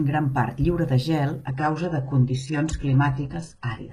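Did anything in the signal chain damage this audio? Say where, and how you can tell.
Yes. At the network stage, an adaptive stream at a lower bitrate: from 1.46 s, after "part lliure de gel", treble abruptly vanishes above 11.1 kHz without any gap, consistent with a switch to a low-bitrate HE-AAC rendition.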